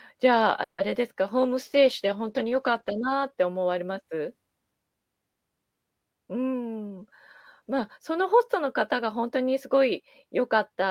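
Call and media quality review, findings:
Call audio freeze, 0.63–0.80 s: the speech stretches into a fading buzz for about 150 ms, then resumes where it stopped. Likely late packets draining the jitter buffer, adding around 150 ms of delay.

Short concealed packet loss, 0.94–0.97 s: a quick smear or wobble. About 20 ms never arrived, and the decoder patched the hole by extending the last sound before blending back.

Call bitrate drop, 1.38–3.35 s: speech goes rough and muffled. The bandwidth estimate fell, so Opus dropped from 32 to 13 kbps and sat at the bottom for about 1.9 s.

Jitter buffer speed-up, 6.53–7.08 s at 111% and 7.61–9.23 s at 105%: speech sounds hurried at unchanged pitch. The buffer was overfull and trimmed pitch-period slices, around 70 ms in each span.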